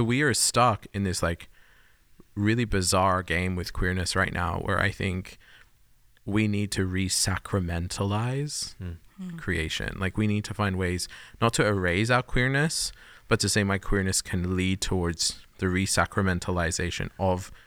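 No technical faults can be heard anywhere in the recording.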